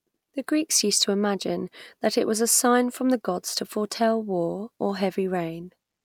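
No technical faults turn up anywhere in this recording, so there's nothing here to point out or trace back to a cause.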